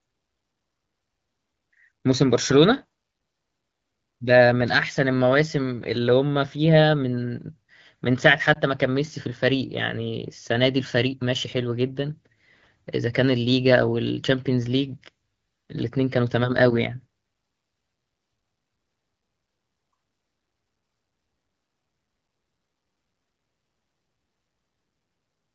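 At 8.54 to 8.58 s there is a brief dip or warble in the speech, which fits a single lost AMR speech frame of about 20 ms. The frame failed its checksum after radio errors, so the decoder filled the gap by repeating the last good pitch and vocal tract parameters at reduced gain. Because only one frame is missing, the sound wobbles momentarily rather than stretching out or fading to silence. The surrounding audio carries the band-limited character of the AMR wideband (HD Voice) codec, consistent with a rate around 12.65 kbit/s.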